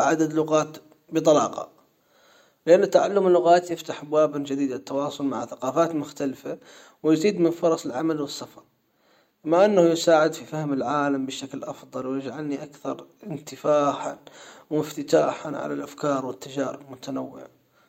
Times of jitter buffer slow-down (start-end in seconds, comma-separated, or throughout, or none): none